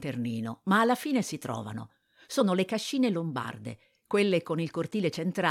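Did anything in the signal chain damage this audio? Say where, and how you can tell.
Yes. Compressed frames skipped, a codec stage fault. At 2.39 s, between "alla fine si trovano" and "le cascine", about 20 ms vanishes.

A corrupt frame decoded, also at the codec stage. It runs from 3.43 to 3.46 s, after "le cascine". Flipped bits misplace energy across a couple of frames. The result is an error peaking around -25 dBFS.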